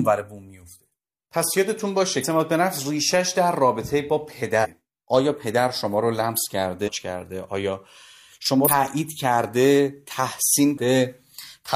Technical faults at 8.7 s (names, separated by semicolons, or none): compressed frames skipped